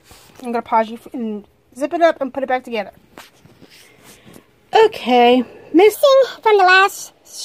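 From 5.95 to 7.44 s, a section at the wrong speed plays 1.43 times too fast. Pitch jumps about seven semitones, likely from mismatched clocks.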